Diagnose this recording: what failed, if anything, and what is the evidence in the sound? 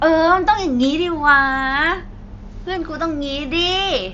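Nothing failed in this recording, so there is no evidence of a fault in the sound.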